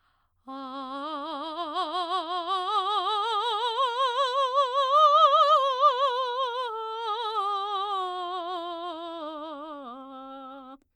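The music runs as one continuous signal, with nothing in it pointing to a fault in how it was captured, processed or delivered.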